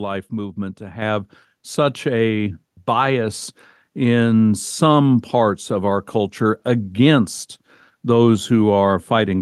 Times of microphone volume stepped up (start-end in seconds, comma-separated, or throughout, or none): 1.02